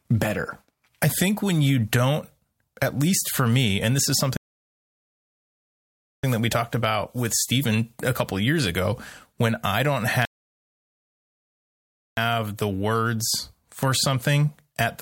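At 4.37 s, right after "me and this is", the speech drops into silence. This is a rebuffering stall: the player emptied its buffer and waited for more data. At 6.24 s it picks up with "that we talked about", nothing skipped. About 1.9 s of dead air is added. A second stall hits at 10.25 s after "ago when I don't". The speech resumes at 12.17 s with "the words for", again adding about 1.9 s.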